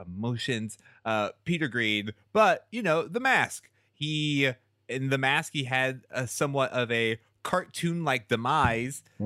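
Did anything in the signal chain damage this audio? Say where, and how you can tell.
Yes. The speech has a brief click or stutter at 3.64 s and again at 7.65 s, about four seconds apart. That regular spacing points to overlapping chunks at the buffer stage: each 4-second block begins 12 ms early, so that sliver plays twice at every join.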